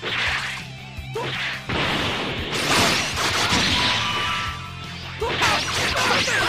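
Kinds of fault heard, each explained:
Compressed frames skipped: whole blocks of the encoded stream are never played, either missing from the file or rejected by the decoder as damaged, so the sound lurches forward. At 3.51 s roughly 150 ms vanishes, which fits about seven 23.2 ms frames, and at 5.41 s about 70 ms, nearer three. A spectrogram shows an abrupt content break, and the waveform a sudden envelope change.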